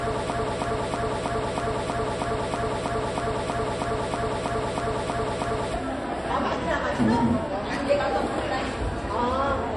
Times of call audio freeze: none

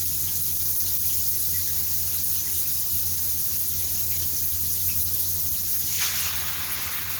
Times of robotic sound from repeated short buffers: none

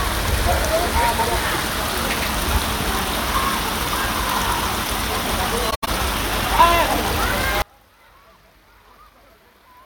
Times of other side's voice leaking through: none

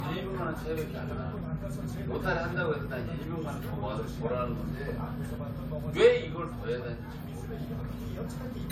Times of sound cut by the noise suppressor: none

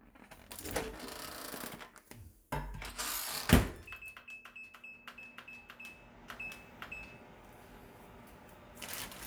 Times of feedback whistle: none

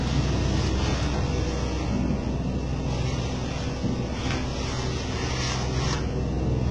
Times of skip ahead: none

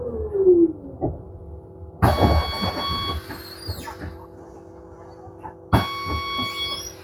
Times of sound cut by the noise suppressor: 1.17-2.01, 4.15-5.72

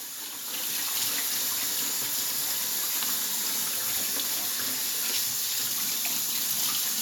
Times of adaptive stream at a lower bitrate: none

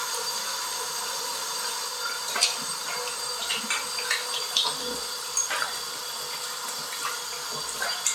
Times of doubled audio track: 0.00-1.88

